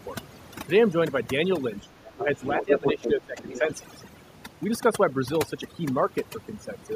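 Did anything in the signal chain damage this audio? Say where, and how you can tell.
Yes. The damage sits in call processing. Throughout the clip, overdone noise removal leaves the background almost silent apart from small twinkling specks. The noise suppressor is set too aggressively. It drives individual frequency bands down to nothing whenever they come close to its noise estimate, so the quieter parts of the speech are stripped away along with the noise.

Speech suppressed in double talk appears three times. There is a brief, shallow dip of a few decibels from 1.80 to 1.87 s. A deeper drop of about 15 dB follows from 2.14 to 2.42 s. The longest comes from 2.6 to 3.68 s, again reaching about 15 dB. The likely cause is the echo canceller failing to tell the local talker from the loudspeaker echo and attenuating both.

The other side's voice leaking through is audible in the same window. 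Faint scraps, roughly 15 dB below the talker, come through from 2.06 to 2.23 s and from 3.48 to 3.59 s. Between 2.44 and 3.12 s the leaked voice is about as loud as the talker. This is likely residual loudspeaker echo that the canceller did not remove from the microphone signal, and it overlaps with the suppression dips above.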